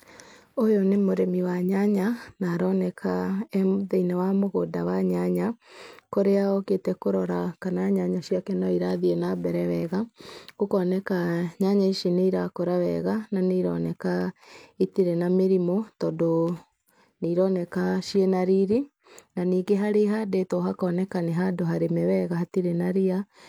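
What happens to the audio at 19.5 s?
Nothing goes wrong at 19.5 s: the speech continues intact through that moment, with no dropout, click, distortion or other fault to be heard.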